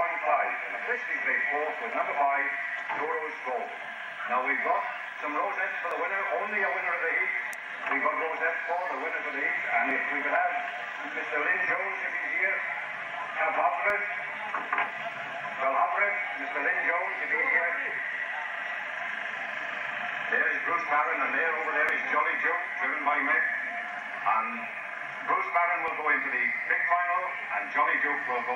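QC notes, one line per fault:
1.92, 5.91, 9.91, 13.90, 17.89, 21.89 and 25.88 s, audio missing between chunks: the capture or processing chain likely works in blocks of about 4 s and drops a few milliseconds, around 7 ms, each time it hands off from one block to the next. The two sides are butted together with no gap, so the waveform jumps abruptly at each join, heard as a brief tick or skip repeating every 4 s.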